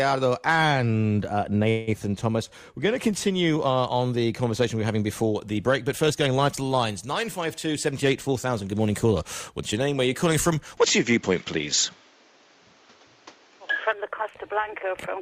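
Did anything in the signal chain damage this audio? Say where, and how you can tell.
Yes. From 1.69 to 1.89 s the sound stretches into a fading buzz or hiss, then resumes intact. This is a call audio freeze, likely from delayed network packets emptying the jitter buffer.

From 7.66 to 10.15 s the audio runs hurried at 107% speed with unchanged pitch. This is jitter buffer speed-up, trimming about a fifth of a second to cut delay.

From 10.77 to 13.93 s the top end vanishes above 7.6 kHz. Level shifts by about 5 dB and new noise appears. The input likely switched to a poorer device.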